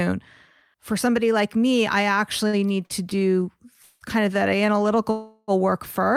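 From 2.47 to 3.24 s, right after "somebody like me I", the speech stutters. This is repeated stalls. Packets reached the receiver late, so its jitter buffer ran dry five times. Each time it stretched the last sound to cover the wait. About 137 ms was filled in all, the longest gap 57 ms, roughly a fifth of the span. Nothing is lost, but the speech drags and hiccups.

At 3.82 s there is a call audio freeze lasting about 0.19 s, just before "kind of that". The last sound is held as a fading buzz or hiss, and then speech resumes where it stopped. A second freeze runs from 5.11 to 5.51 s. It fills about 0.37 s and fades to near silence for its last 20 ms. Both likely come from packets held up in transit. They insert gaps without dropping any speech.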